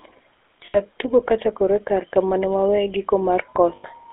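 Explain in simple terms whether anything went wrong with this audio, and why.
The whole clip has passed through the GSM full-rate codec, the early mobile-phone coder. It rebuilds speech from a simple model of the voice driven by evenly spaced pulses, and that gives the plainly audible buzzy, gravelly roughness here. The line band runs only from about 300 Hz to 3.5 kHz, so it sounds thin and boxed-in. A plain narrow phone line would sound muffled but smooth. This grit comes from the coder itself.

There are also two short stretches of lost GSM frames, at 0.66 to 0.78 s and 3.76 to 3.85 s, each about 80 ms of missing audio. Rather than falling silent, the phone filled each gap by repeating the last good moment, so you hear a brief rough, metallic ring where the sound should have continued. A simple dropout would leave a clean hole. This gap is smeared over with a held, ringing tone.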